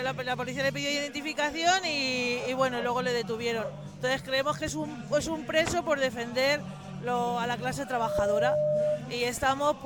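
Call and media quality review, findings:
Single tone at 602 Hz swelling into a squeal, 7.87 to 9.05 s; builds in a fraction of a second, peaks about 5 dB above the programme audio. Loudspeaker feedback squeal: mic picking up its own loudspeaker, loop gain above one at 602 Hz, tone growing until the amplifier limits it or the loop breaks.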